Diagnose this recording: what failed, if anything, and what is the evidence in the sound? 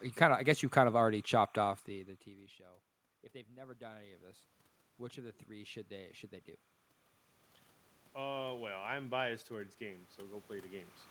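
A faint, steady chirping warble sits under the speech for the whole recording, roughly 35 dB below it and flipping between pitches near 1 and 2 kHz. This is timecode bleed, picked up in the analogue wiring. Linear timecode running at 29.97 frames per second on an adjacent track or cable couples into the audio path, and its square-wave biphase coding produces that two-tone chatter.

Three times the speech and the room noise behind it swell up together: from 3.46 to 4.51 s by about 5 dB, from 5.14 to 6.20 s by about 4 dB (ending just before "they do"), and from 8.14 to 10.09 s by about 5 dB. This is automatic gain rising, in the call processing. In the first two cases the input fell by about 22 dB, and the gain control slowly raised its gain to compensate, lifting the background along with the voice. The level changes near 1.5 s and 10.5 s are the talker moving, not the gain control.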